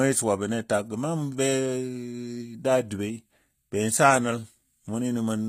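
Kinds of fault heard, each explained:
HE-AAC compression: The encoder most likely kept only the lower spectrum and rebuilt the treble by spectral band replication, copying lower bands upward under a coarse envelope. The top end reaches high but is synthetic, so its harmonics don't line up with the real ones below the crossover. The damage is plainly audible in this speech: s sounds turn gritty and metallic, nothing remains above 15.4 kHz, and the overall result fits a low bitrate of around 24 kbps.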